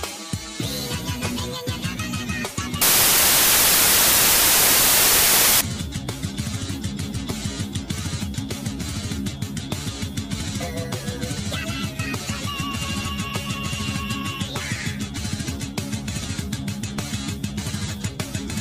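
From 2.82 to 5.61 s the samples are built from the wrong bytes: misordered or misaligned bytes promote the low bits, producing loud, harsh broadband noise, close to white on loud sounds.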